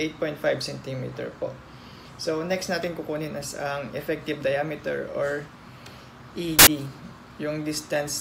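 At 6.59 s there's a sharp burst of loud, harsh broadband noise lasting about 80 ms, to 6.67 s. That's samples built from the wrong bytes: for that stretch the reader assembled each sample's bytes incorrectly, whether off by one, in swapped order, or with the wrong alignment. The rapidly changing low-order bits ended up as the most significant part of each value, so the sound turns into loud, harsh noise.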